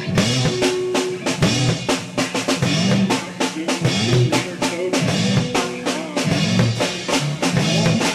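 The music in this clip comes through without any audible technical fault at any point.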